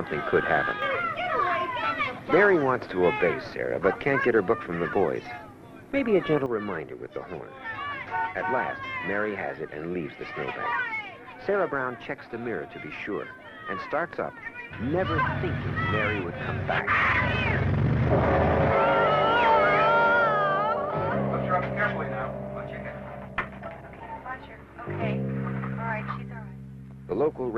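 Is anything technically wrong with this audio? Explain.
Yes, there's a sudden gain jump, twice. From 0.72 to 0.82 s the level drops by about 6 dB and comes straight back, then at 6.46 s it drops by about 6 dB again and stays down to the end. The likely cause is a digital gain change, maybe a bit shift, applied from one sample to the next with no ramp. You can tell because the sound and the background noise fall together, abruptly.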